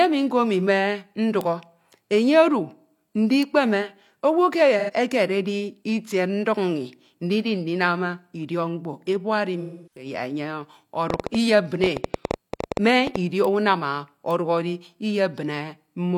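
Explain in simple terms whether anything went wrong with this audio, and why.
Several things went wrong in this speech recording.

A bit error spike happened four times, at 1.41, 3.43, 13.45 and 14.31 seconds. Each time, a single stored number was corrupted for one instant, so you hear one sharp, isolated tick that has nothing to do with the speech.

AAC frame loss with concealment struck twice. Small chunks of the compressed audio went missing, and the decoder patched the gaps by guessing from the sound just before. From 4.79 to 4.91 seconds this leaves a brief smeared, noisy patch. From 9.61 to 10.06 seconds the patch lasts about 0.3 seconds.

A train of clicks runs from 11.10 to 13.17 seconds, likely caused by interference from nearby equipment or a faulty connection. It adds roughly twenty clicks, about nine per second and unevenly spaced, ticking loudly over the speech.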